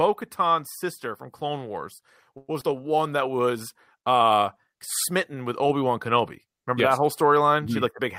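A speech recording with several call-transport faults clustered in its first three seconds. From 2.37 to 2.49 s the sound stalls into a fading buzzy continuation of the last sound, ending in about 10 ms of silence before resuming: a call audio freeze, likely from packets held up in transit so the jitter buffer ran dry and the receiver stretched the last sound, inserting about 111 ms without losing anything. At 2.61 s comes a tiny smear, a short concealed packet loss: about 40 ms of audio never reached the decoder, the gap was patched with about 9 ms of synthesized continuation, and the receiver dropped roughly 30 ms of the delay built up by the freeze. From 2.70 to 3.01 s, just before "that was uh smitten", the speech drags at unchanged pitch, running at 89% speed. This is a jitter buffer slow-down: repeated pitch periods add 42 ms to rebuild the buffer's reserve. At 5.69 s, right after "was uh smitten with", a low thump marks a DC step, where the waveform's zero line jumps and the fault runs through the end while the speech itself carries on unchanged.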